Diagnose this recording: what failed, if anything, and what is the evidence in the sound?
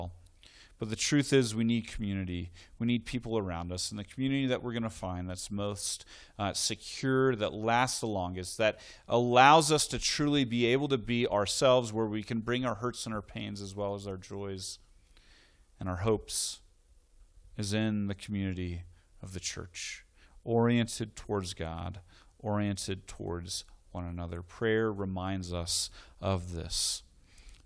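Nothing in this speech recording points to a failure at any stage, from the capture chain through to playback.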